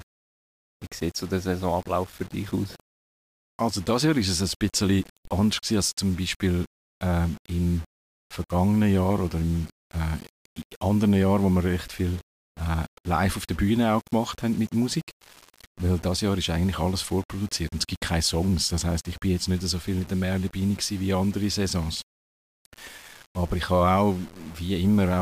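Low bit depth without dither runs through the whole of this speech clip, from start to finish. The sound is grainy and gritty, with distortion that rises and falls with the voice, and the quietest passages sputter or drop out rather than fading smoothly. The error sits roughly 25 dB below the signal. The likely cause is rounding to about 6 bits with no dither, so the quantisation error tracks the waveform instead of becoming a steady hiss.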